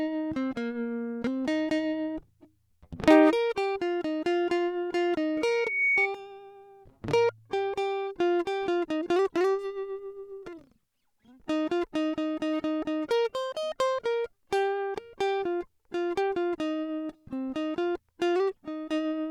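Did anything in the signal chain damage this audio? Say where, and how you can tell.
Yes. Loudspeaker feedback squeal in the acoustic loop between playback and microphone: from 5.37 to 6.08 s a pure 2.2 kHz tone swells over roughly half a second to sit about 5 dB above the music. At that frequency, loop gain exceeded one, so the tone reinforced itself.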